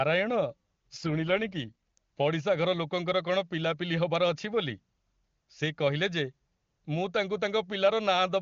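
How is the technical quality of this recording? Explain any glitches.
The recording is speech carried over an AMR wideband (HD Voice) link, with one audible glitch: an AMR rate drop. At its higher rate, which fits the top 23.85 kbit/s mode, the codec leaves at most faint damage.

From 0.97 to 1.98 s, the speech turns rougher and more synthetic, then recovers. A weak radio link makes the network switch AMR to a lower mode, consistent with about 8.85 kbit/s, and spend the freed bits on error protection, so the vocal model is coded coarsely. Unlike a dropout or a bandwidth fallback, there is no gap and the audio band stays the same. Only the texture degrades.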